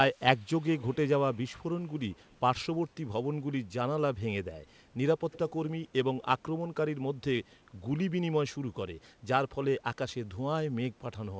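Speech that came through a call, with an echo leak: brief, faint copies of the voice trailing 153 ms behind at 0.11–0.21, 0.37–0.43, 0.62–0.96, 1.34–1.65, 2.27–2.35 and 5.33–5.52 s. Most sit about 35 to 40 dB down, but the ones at 0.62 s (about 25 dB) and 5.33 s (about 20 dB) are easiest to catch. This is likely a far-end loudspeaker whose echo canceller let some of its mic pickup back through. The call audio has nothing above 8 kHz, which points to a wideband codec such as G.722 at 64 kbps.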